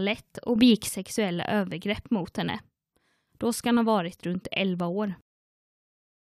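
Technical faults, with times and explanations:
0.56–0.89 s, sudden gain jump: speech and noise floor step up together by about 6 dB before "övergrepp mot henne", likely an unramped digital gain change.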